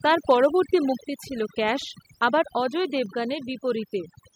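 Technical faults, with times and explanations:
Throughout: overdone noise removal. The background falls to near silence with scattered twinkling specks, because a noise reducer pushed too hard shuts off individual frequency bands near its noise estimate, taking quiet speech detail with them. Unlike a plain low-pass or muffled sound, the damage flickers band by band.
0.30–0.46 s: microphone overload. The loudest syllables gain a harsh, crackling edge as peaks exceed the converter's ceiling by about 1 dB, with around one percent of samples flattened. This is likely an input volume set too high, and it differs from codec distortion by sitting only on peaks.
1.02 s: microphone volume stepped down. Speech and background drop together by about 5 dB in a single step, just before "ছিল ক্যাশ আবার অজয়", likely the call software cutting the device input after the clipped peaks. Unlike a gradual automatic gain fade, it is one instant drop.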